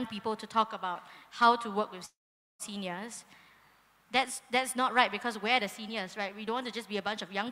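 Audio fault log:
2.05 to 2.62 s, call audio freeze. The sound stops and the last moment carries on as a brief buzz that fades, then about 470 ms of silence follows. The likely cause is packets held up in transit, leaving the jitter buffer empty. The receiver filled roughly 540 ms this way. When the audio resumes it picks up where it stopped, so nothing is lost. Everything after is simply about 540 ms later.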